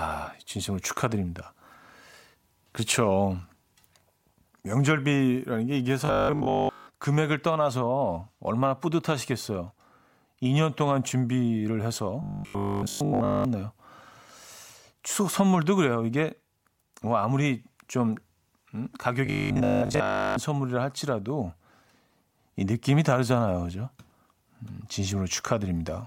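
Robotic sound from repeated short buffers shows up at 6.05–6.87 s, 12.23–13.45 s and 19.26–20.36 s. The speech collapses into a stiff 50 Hz metallic buzz, likely a 20 ms chunk looped while fresh audio failed to arrive. The first two are almost entirely repeats, the last mostly.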